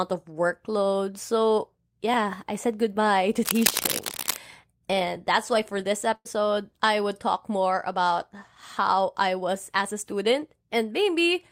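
Cable scratch noise runs from 3.42 to 4.38 s: for almost a second, dense, uneven bursts of scratching and rustling sit over the speech, roughly as loud as the voice itself. This is likely a worn cable, connector or control being moved, its contact resistance jumping rapidly from moment to moment so that the signal picks up irregular crackle and hiss until the contact settles.

A burst of packet loss follows at 6.15 to 6.27 s, right after "that's why for this". About 100 ms of audio never arrived in time, and the receiver filled a gap of roughly 96 ms by extending the last sound it had and letting it fade, which is heard as a brief held buzz or hiss. The speech then jumps ahead to "I would talk more", with the missing stretch simply gone.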